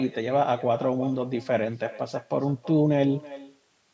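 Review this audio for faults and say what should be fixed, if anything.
Echo with no canceller runs through the whole speech clip. Every phrase returns about a third of a second later, about 18 dB down and thin. The far end's loudspeaker feeds its microphone uncancelled. Enable acoustic echo cancellation there, or use headphones.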